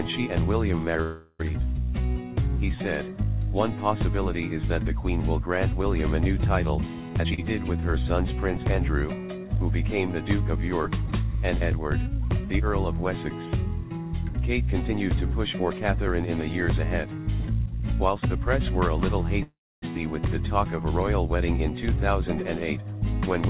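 Call audio freeze at 1.02–1.41 s: a held, fading buzz fills about 0.37 s, likely because packets stalled and the jitter buffer ran dry. Playback then resumes where it stopped, so nothing is lost, only delayed. The narrowband sound throughout, with nothing above 4 kHz, fits a 64 kbps G.711 mu-law call path.

Jitter buffer speed-up at 7.09–7.32 s: the buffer was over its target, so the receiver clipped out pitch-period-sized slices repeatedly, running the sound at 198% speed with unchanged pitch. About 0.2 s is removed, giving a sharply hurried burst.

Short stall from a late packet at 7.34–7.40 s: a packet missed its slot, and the last sound is stretched by 38 ms until it arrives. Nothing is skipped, but the sound hangs slightly too long with a faint buzzy dip.

Jitter buffer speed-up again at 14.85–18.35 s: a gentler drain at 105% speed removes roughly 0.15 s. The pitch stays steady, but the pace feels subtly pushed.

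Call audio freeze at 19.43–19.84 s: a longer gap of 396 ms. The fill fades into 260 ms of silence before the stream picks up again from the same point.

Jitter buffer speed-up at 21.84–23.41 s: 104% speed trims under a tenth of a second, a faint rush toward the end.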